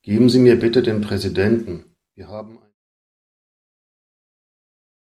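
No technical faults can be heard in this speech clip. The level fades out smoothly from around 1.5 s, reaching the end of the fade at 2.75 s with no click or hard edge.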